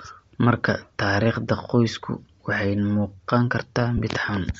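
Speech with a grainy, breathy edge throughout and a thinned, noise-filled top end. This is plainly audible damage from a low-rate transform codec, likely Bluetooth LC3 compression, consistent with roughly 32 kbps and 7.5 ms frames. At 3.97 to 4.00 s, lost LE Audio frames briefly replace the signal with a short noisy smear, about 15 ms long, which points to two dropped frames. The decoder filled the gap by repeating the previous spectrum with randomised signs.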